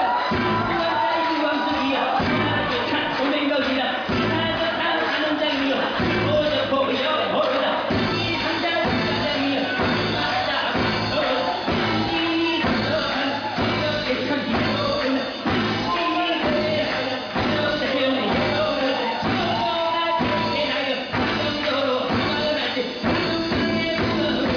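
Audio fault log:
No faults heard anywhere in the audio.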